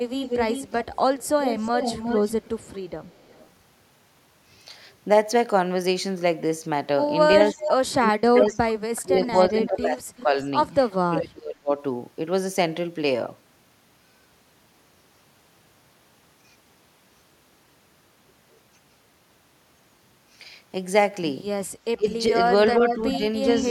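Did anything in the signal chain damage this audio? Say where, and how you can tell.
Yes, at the call-processing stage. Echo leak appears at 0.17 to 3.48 s, 7.49 to 7.71 s, 8.95 to 11.18 s and 22.07 to 23.65 s. A delayed copy of the speech trails the original by 367 to 401 ms. It sits about 10 dB below the direct speech in the first and last stretches, only about 5 dB below in the brief 7.49 s burst, and about 25 dB below around 9 to 11 s. The likely cause is a loudspeaker-side echo canceller that failed to subtract what its microphone picked up, so the residue went back down the line.

Speech suppressed in double talk occurs at 7.52 to 10.37 s, 11.04 to 11.73 s and 21.96 to 23.64 s. These spans overlap the echo stretches, where both directions are active. The speech level dips sharply in pieces, by up to about 30 dB in the first two spans and about 25 dB in the last. The affected time totals roughly 1.5 s, 0.7 s and 0.3 s. 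This likely happened because the canceller could not tell the near talker from the loudspeaker echo and attenuated both.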